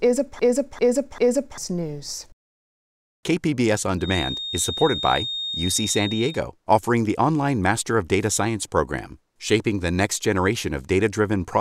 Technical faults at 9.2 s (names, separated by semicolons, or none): none